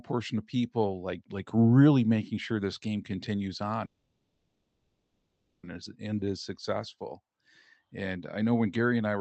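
Just after "sure this game continues", from 3.85 to 5.65 s, the speech stops and a call audio freeze takes its place, likely from packets held up so the jitter buffer ran dry. The last sound is stretched into a fading buzz for about 1.78 s, ending in a 100 ms silence, then resumes at "and is" with nothing lost but the timing now 1.78 s late. On a spectrogram this appears as a smeared, decaying band that thins to blank, all capped near the 8 kHz ceiling of the call codec.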